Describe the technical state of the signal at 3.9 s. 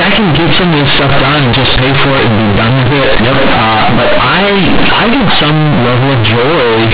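At 3.9 s the speech is loud, harsh and buzzy, with heavy noise in the gaps. This is companded audio read as linear throughout: mu-law bytes are played as plain 8-bit samples without expansion.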